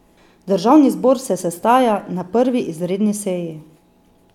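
No technical faults can be heard anywhere in this recording of speech.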